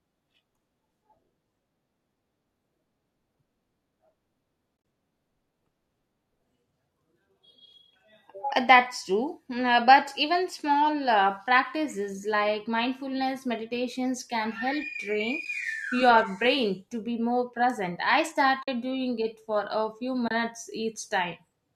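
AAC frame loss with muting first hits the speech at 4.77 to 4.85 s, where about 60 ms of sound drops out in short gaps spread across 80 ms, the longest around 30 ms. Further holes follow at 15.45 s, between "meditations can help train" and "your brain to be"; at 18.63 to 18.68 s, after "be more present I" and before "doing it for a"; and at 20.28 to 20.31 s, after "it for a few". Each time the decoder received nothing for a stretch and output silence in its place. Because the overlapping transform windows fade the audio down and back up, the holes have soft edges. Gap lengths stepping in 10 ms units fit the short frames of low-delay coding, likely AAC-ELD, which is otherwise decoding normally.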